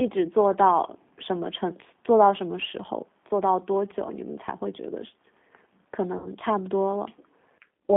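The G.729 codec is present from start to finish. The speech sits in a narrow line band of about 200 Hz to 3.5 kHz and sounds plainly rough and synthetic, which fits 8 kbit/s coding that rebuilds the speech from a vocal tract filter, a pitch predictor and a few pulses per frame.

VoIP packet loss concealed by the speech codec occurs from 6.18 to 6.28 s. The decoder stretched its last pitch and filter across a gap of about 60 ms, so the speech turns into a fading extrapolation. The distortion persists briefly after real packets resume.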